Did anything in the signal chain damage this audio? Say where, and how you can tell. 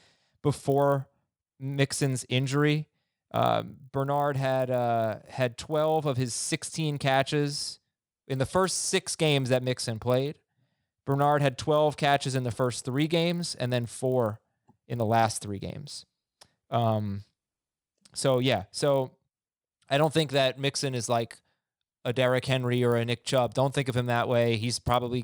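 Yes. A resampler restarted on every block runs throughout the speech, heard as a 50 Hz buzz that rides only on the speech. In the sample-rate conversion stage, each 20 ms block went from 24 kHz to 48 kHz in isolation, leaving a small error at every block edge.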